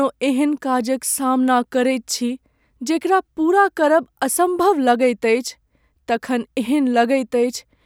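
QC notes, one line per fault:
No fault to note.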